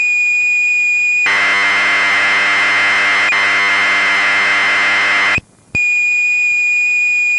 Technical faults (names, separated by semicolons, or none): none